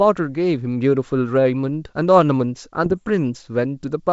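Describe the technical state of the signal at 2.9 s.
At 2.9 s the speech sits inside a burst of bit errors on an ADPCM link, running from about 2.84 to 3.05 s on the G.722 wideband path. A low error rate, around a fifth of a percent, flips bits that throw the decoder's step size and predictor off, so each error rings on for milliseconds as pops, rough grainy bursts and brief level jumps. Unlike packet loss, nothing drops to silence or repeats.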